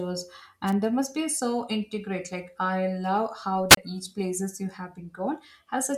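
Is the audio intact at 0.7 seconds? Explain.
No. A wireless microphone squelch dropout runs from 0.66 to 0.73 s: the fading radio signal trips the receiver's squelch, leaving a brief hiss-edged hole before "there must be so".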